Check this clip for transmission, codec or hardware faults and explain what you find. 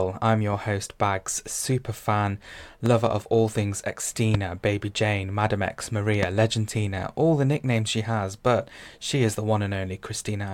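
Three loud pops break into the speech: at 2.86–2.89 s, between "super fan" and "of all things"; at 4.34–4.37 s, just after "of all things"; and at 6.23–6.25 s. Each is a single sharp click about 15 dB above the speech, likely a voltage pulse entering the chain, and the speech continues underneath. A waveform shows a tall narrow spike, and a spectrogram shows a thin full-height vertical line.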